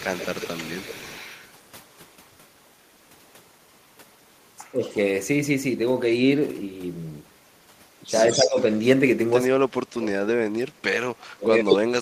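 From 0.0 to 2.3 s, a far-end echo canceller likely failed to remove its loudspeaker pickup, an echo leak: a copy of the speech returns about 133 ms late, roughly 15 dB down. At 4.72–4.84 s, likely speech suppressed in double talk, with the canceller ducking both sides, dips the talker by around 10 dB. A faint echo at 4.93–4.98 s follows at 143 ms, about 30 dB down. At 8.33–8.79 s a 152 ms echo sits only about 5 dB below the speech while suppression cuts it by about 20 dB at 8.35–8.58 s. Deeper cuts of about 30 dB follow from 9.47 to 10.44 s and from 10.66 s to the end. Within that last stretch, a 160 ms echo at 11.7–11.75 s is about as loud as the speech.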